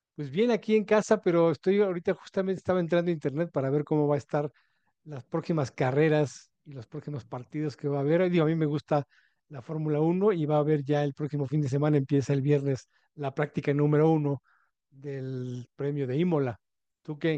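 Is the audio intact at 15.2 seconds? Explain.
Yes, at 15.2 seconds the speech plays through intact, with no dropout, click, distortion or other fault at that moment.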